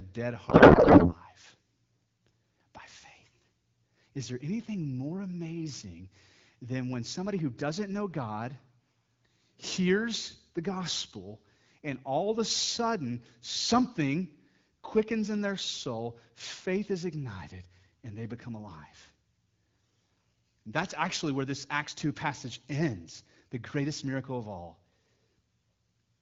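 Speech clip with a codec payload misread from 0.49 to 1.16 s. The speech in that span is replaced by garbled noise and warble that barely tracks it. The sound fits AMR frames packed in octet-aligned form being unpacked as bandwidth-efficient. The decoder takes padding bits as data, so every field lands in the wrong place. The frames still parse, and nonsense parameters drive the synthesis. Around it, the AMR-WB coding sounds clear, consistent with a rate near 12.65 kbit/s.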